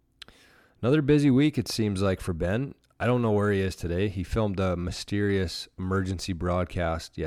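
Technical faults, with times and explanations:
No technical faults with times and explanations can be given, as none occur in this speech clip.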